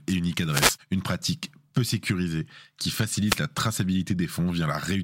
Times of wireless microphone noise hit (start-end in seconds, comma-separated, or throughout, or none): 0.50-0.78, 3.24-3.39